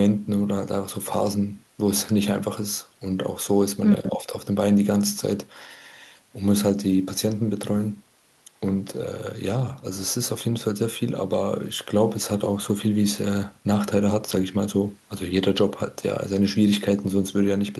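No technical faults can be heard anywhere in the recording. Nothing in the speech calls for a timestamp or an explanation.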